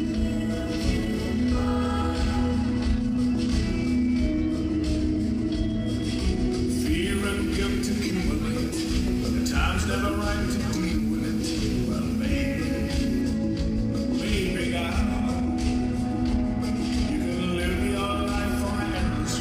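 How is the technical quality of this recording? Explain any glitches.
One fault stands out. Video or display buzz runs from 7.13 to 13.22 s: a screen or video cable is coupling into the audio path, adding a 59.94 Hz field-rate buzz with hash above it and a thin 15.7 kHz line-rate whine, sitting about 15 dB below the main sound.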